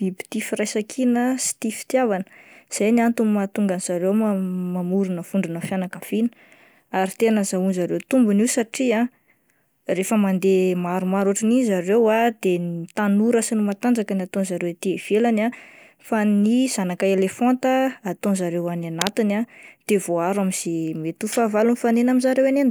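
A worn cable, connector or control was likely moved around 18.98 s, making its contact resistance jump about erratically for roughly 0.15 s, until 19.13 s. That produces cable scratch noise: a dense, ragged burst of crackle and rustle laid over the speech, only a little quieter than the speech itself, heard as a brief scratching sound just before "ah de voaharo".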